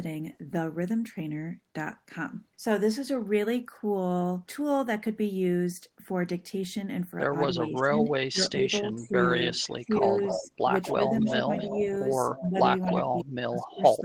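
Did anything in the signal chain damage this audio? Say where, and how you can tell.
Yes. The damage sits in call processing, and there are two related faults.

Speech suppressed in double talk appears twice. From 7.52 to 9.16 s the speech level dips in pieces, about a second in total, falling by as much as about 15 dB. From 9.74 s to the end of the clip it drops again, this time by up to about 30 dB. The likely cause is an echo canceller that could not separate the near talker from loudspeaker echo while both sides spoke, so it attenuated both.

Echo leak runs from 9.55 to 13.24 s. A second copy of the speech trails the original by 267 ms and is only a few dB quieter than the direct speech. That fixed lag and the repeated content mark it as echo. It is likely residual loudspeaker pickup that the far end's echo canceller failed to remove and sent back down the line.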